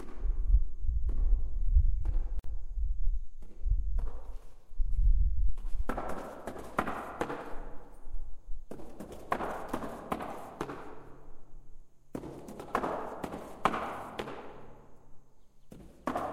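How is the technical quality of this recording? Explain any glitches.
There is one glitch. At 2.39 to 2.44 s, a gap at a join of encoded pieces drops out for about 49 ms: separately encoded segments kept their start delay and end padding. On a waveform it's a brief hole with smeared edges; the spectrogram shows a thin vertical blank band.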